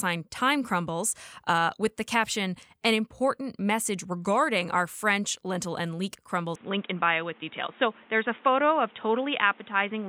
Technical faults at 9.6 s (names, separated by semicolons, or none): input switched to a poorer device